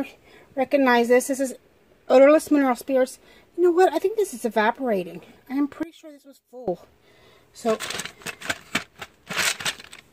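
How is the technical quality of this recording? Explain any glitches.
One glitch stands out, from 5.83 to 6.68 s. The likely cause is one channel inverted: one side of the stereo pair flipped polarity, so when the two channels are combined, everything they share cancels instead of adding. For those 0.84 s the level falls by about 20 dB, and the sound nearly disappears, background included. What remains is a faint residue before full level returns.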